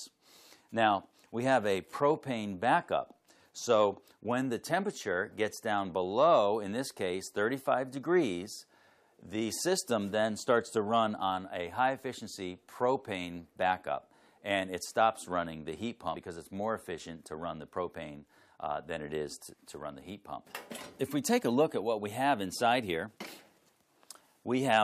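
A brief blip at 16.15 s, then another at 23.26 s, each lasting under 20 ms. Both come from damaged data in the compressed stream: corrupted bytes make the decoder misread those frames and lose sync until it finds the next valid frame header.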